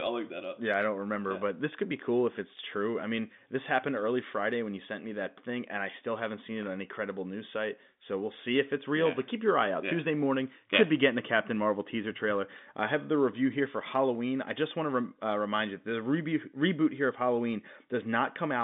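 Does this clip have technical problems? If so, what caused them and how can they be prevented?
No, there are no technical faults to point to in this speech clip. It has come through a G.711 telephone line, so the sound is limited to roughly 150 Hz to 3.6 kHz, as that coding path normally gives.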